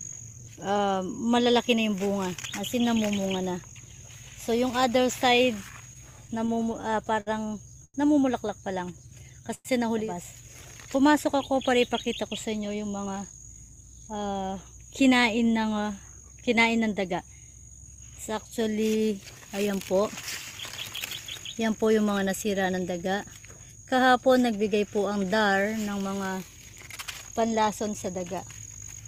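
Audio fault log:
5.93 to 7.29 s, repeated stalls (stutter): the sound keeps catching and restarting, ten times in this stretch, as packets arrived late or slower than playback and the jitter buffer kept running dry. Each time the receiver carried the last sound forward until audio arrived, about 151 ms filled in all, the longest hold 59 ms, with nothing lost. Unlike a single late-packet stall, the hitches repeat in quick succession, so the passage drags with a stammering rhythm.
7.85 to 7.96 s, short stall from a late packet: one sound is held too long, for about 95 ms, because a single packet missed its slot and the buffer emptied. The receiver stretched what it last had, then resumed exactly where it left off, so nothing is missing and everything after sits about 95 ms later. It is one isolated hold, not a cluster, and shorter than a freeze.
8.93 to 9.47 s, jitter buffer slow-down: the audio runs at about 94% speed with unchanged pitch, drawn out by roughly 44 ms in total. 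To rebuild its reserve the receiver repeated single pitch periods and slivers of pause many times over. What sets it apart from a stall is that nothing halts: the stretching is spread evenly across half a second instead of landing as one held sound.
9.54 to 9.67 s, call audio freeze: the sound stops moving and is carried on as a fading sound for about 103 ms, ending in around 20 ms of silence before the audio picks up from the same point, adding about 103 ms of delay with nothing lost. This was likely caused by packets held up in transit draining the jitter buffer. The fade into silence marks it off from the steadier held sound of the stall at 7.85 s.
12.48 to 14.09 s, jitter buffer speed-up: the audio hurries along at about 113% speed while the pitch stays put, as the receiver trimmed out tiny pieces of one or a few pitch periods again and again to shed excess buffered delay, about 0.2 s in all. 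It is the mirror of the slow-down at 8.93 s: here sounds are clipped shorter and the pace feels rushed, not drawn out, and there is no gap or held sound.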